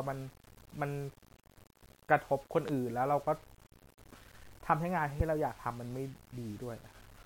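From start to finish the speech carries a rough, grainy layer, the sign of low bit depth without dither. The graininess rises and falls with the speech and turns gritty on quiet syllables, which fits rounding to about 8 bits. It sits not far below the speech itself. Unlike dithered hiss, which stays as a steady, even wash, this distortion follows the signal and thins to near silence in pauses, so it is likely plain rounding with no dither added.

At 2.68 to 2.71 s a single loud pop lands on top of the speech, peaking about 10 dB above it, and the speech carries on underneath. A second, stronger pop follows at 5.20 to 5.23 s, about 15 dB above the speech. Each is a brief voltage jolt that likely comes from a plug, switch or driver glitch. The later circuits shape the pulse. That sets it apart from a dropout, where the sound would break off.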